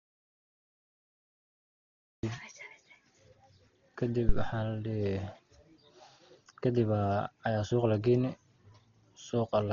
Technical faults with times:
0.00-9.73 Dolby Digital compression
0.00-2.23 audio dropout to silence
4.29-4.56 phantom power thump

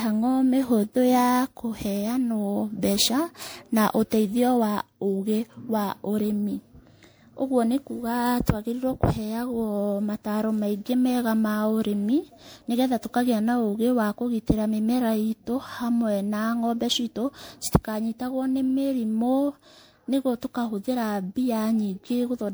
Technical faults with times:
0.00-22.54 generation loss

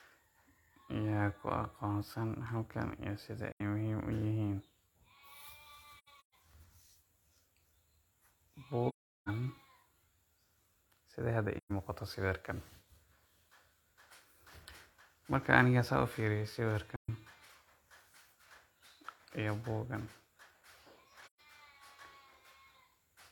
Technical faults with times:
3.52-3.61 AAC frame loss with muting
5.98-6.34 AAC frame loss with muting
8.89-9.29 AAC frame loss with muting
11.57-11.71 AAC frame loss with muting
16.96-17.10 AAC frame loss with muting
21.24-21.40 AAC frame loss with muting

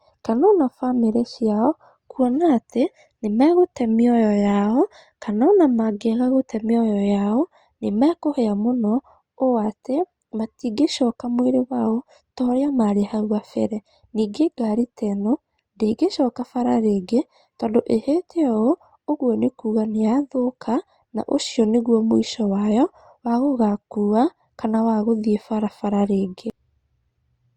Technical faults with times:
none

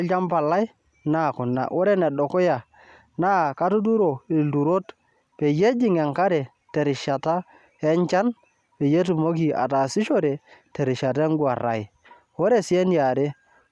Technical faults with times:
none

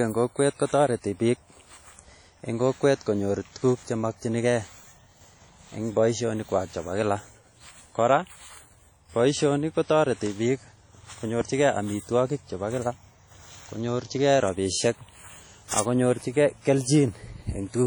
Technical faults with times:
0.00-17.86 WMA compression

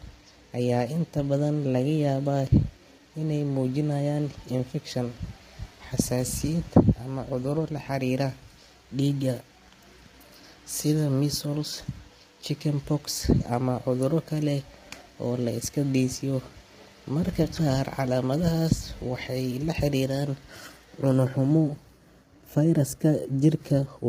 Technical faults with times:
0.00-24.09 low-delay AAC compression

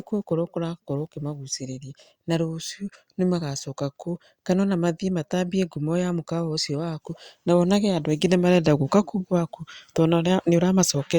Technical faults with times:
none

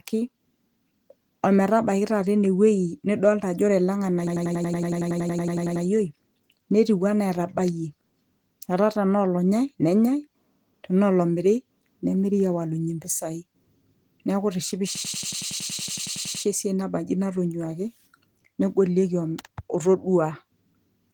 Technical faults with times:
4.27-5.85 system hang loop
14.95-16.44 system hang loop

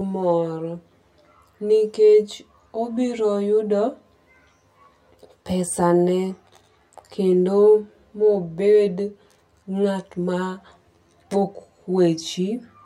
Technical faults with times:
0.00-12.86 channel delay (comb filtering)

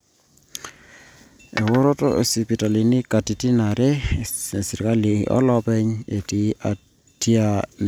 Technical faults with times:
none

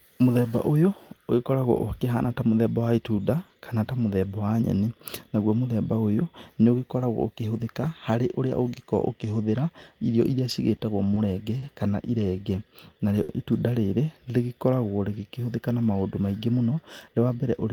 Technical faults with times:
10.76-10.81 short stall from a late packet
11.14-11.19 short stall from a late packet
11.58-11.65 short stall from a late packet
12.36-12.94 jitter buffer slow-down
13.23-13.32 short stall from a late packet
16.58-17.52 jitter buffer speed-up

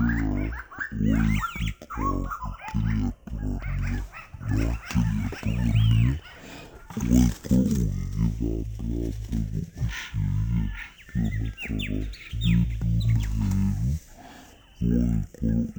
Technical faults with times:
0.00-15.79 stereo read as mono

